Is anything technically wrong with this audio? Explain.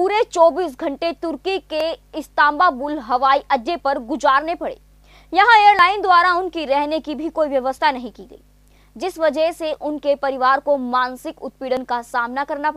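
Yes. At 1.80 s, 5.79 s and 11.77 s the audio makes a tiny skip: a few milliseconds go missing and the sound on either side is butted together with no gap, leaving a small discontinuity at each point. The likely cause is audio missing between chunks, where the capture or processing chain works in 2.0-second blocks and drops a sliver each time it hands over from one block to the next.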